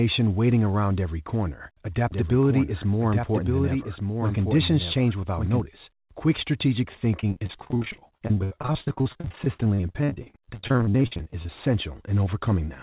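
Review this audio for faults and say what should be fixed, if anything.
From 2.12 to 5.60 s there is a doubled audio track. A second full-band copy trails about a second behind, a few dB quieter, likely from a duplicate capture path. Make sure only one capture route feeds the mix.

From 7.2 to 11.50 s there is repeated packet loss, heard as a robotic sound. Dozens of holes, the longest 62 ms, are patched by stretching the previous sound. About 41% of this span is filled in. A steadier network and a deeper jitter buffer would prevent it.

Through the G.711 A-law call path, nothing is heard above 4 kHz.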